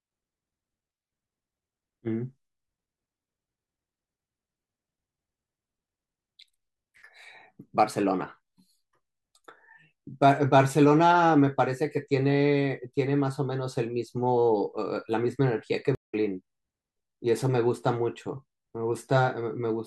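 At 15.95 s a stream reconnect drops the speech into 179 ms of silence; playback resumes at 16.14 s, roughly 150 ms further along the live stream.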